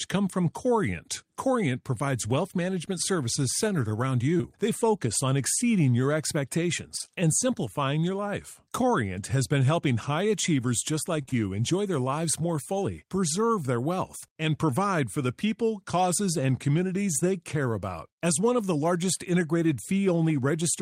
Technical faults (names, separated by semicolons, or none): short concealed packet loss; repeated packet loss (robotic sound)